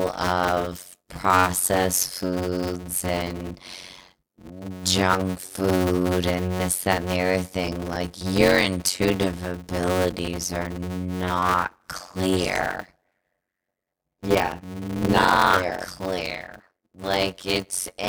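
From start to finish the speech carries a block size mismatch (padded) fault: each block written is shorter than the block read, and the remainder is filled with silence. That inserts a gap in every block, producing a steady buzz at about 92 Hz and slowing delivery to 0.533 times normal speed at roughly natural pitch, which fits 256-sample blocks being read as 480-sample ones. A waveform shows evenly spaced flat near-silent runs; a spectrogram shows vertical gaps with harmonics of 92 Hz.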